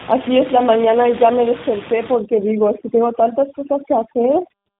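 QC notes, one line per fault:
Throughout: tandem speech coding. The audio sounds rough, muffled and warbly, and nothing is heard above 3.8 kHz. That points to a chain of two speech codecs, likely a CVSD link followed by a G.711 hop and then a low-rate G.729A coder. Each stage decodes the audio and re-encodes it, so every coder must model errors the previous one already introduced. Those errors compound into a harsher, duller result than any single link would produce.
2.14 to 4.80 s: overdone noise removal. From 2.14 s to the end of the clip, the room noise, which sits about 13 dB below the speech before this point, collapses to near silence with twinkling specks. A noise suppressor set too aggressively is shutting off individual frequency bands whenever they approach its noise estimate. The quieter parts of the speech fall below that threshold and are removed along with the background.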